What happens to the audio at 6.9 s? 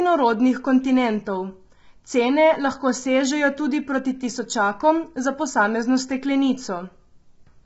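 Low-delay AAC compression is present at 6.9 s, as it is across the whole clip. The speech there sounds rough and grainy, with noise filling the gaps between the harmonics, and the audio stops at about 7.7 kHz. This likely comes from AAC-ELD at a low bitrate, consistent with about 16 kbps: its short frames cannot separate the pitch harmonics cleanly, and with so few bits the coder smears noise across them and discards the top band.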